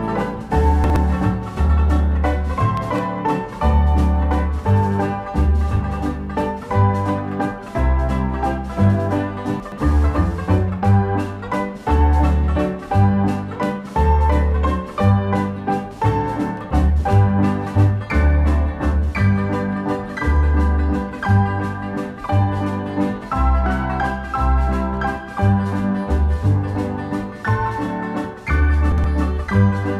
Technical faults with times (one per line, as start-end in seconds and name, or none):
0.84-0.96 chunks out of order
9.60-9.78 chunks out of order
28.92-29.04 chunks out of order